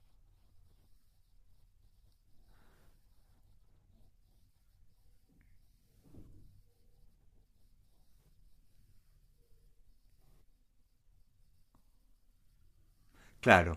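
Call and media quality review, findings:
No faults found in recording.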